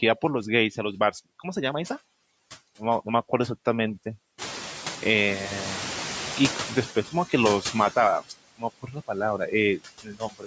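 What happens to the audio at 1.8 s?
At 1.8 s you're hearing noise suppressor artifacts, which run through the whole clip. The suppressor pulls down each band it judges to be steady noise, frame by frame, by about 14 dB, so the background drops away between words and swells back up under the speech.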